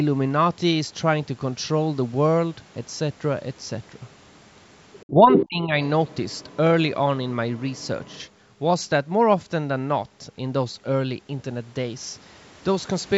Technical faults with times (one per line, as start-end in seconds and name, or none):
4.93-5.46 other side's voice leaking through
5.10-5.79 speech suppressed in double talk
6.07-6.56 other side's voice leaking through
7.56-8.28 other side's voice leaking through